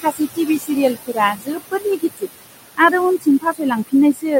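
Noise suppressor artifacts run through the whole clip: the room noise, sitting about 12 dB below the speech, is pulled down by about 19 dB wherever it stands alone, then rises again under the talking. Its remnant shows on a spectrogram as speckled, blinking patches between words.

Speech cut by the noise suppressor appears from 0.02 to 2.3 s, with about a second of speech affected in all, and again from 2.75 s to the end. The suppressor mistook quiet speech for noise and turned it down with the background, by up to about 20 and 21 dB. Soft consonants and word endings sound swallowed. The waveform shows tails clipped short, and the spectrogram shows faint high-frequency consonant energy missing.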